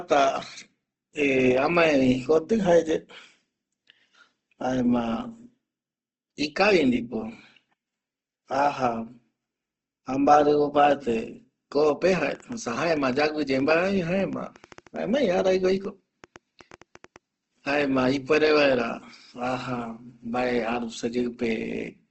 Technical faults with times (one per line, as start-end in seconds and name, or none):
0.00-22.10 Opus compression
11.84-17.17 train of clicks